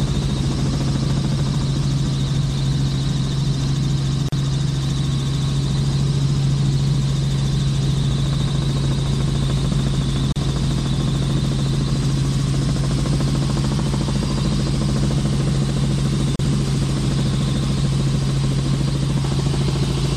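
At 4.29 s, 10.32 s and 16.36 s the sound breaks for about 39, 34 and 34 ms. These are gaps at the joins of encoded pieces: separately encoded six-second segments were spliced without removing each run's start-up delay and final-frame padding. Unlike a packet dropout, the silences repeat about every 6.0 s, their edges are smeared rather than clicky, and the sound resumes from where it stopped, with nothing missing.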